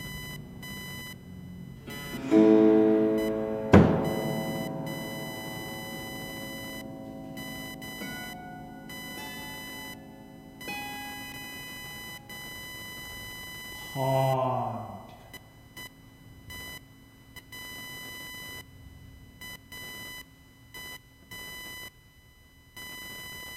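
Computer activity noise runs throughout: a buzzing chirp near 1 kHz, about 15 dB below the signal, from processor or graphics load disturbing the shared audio ground.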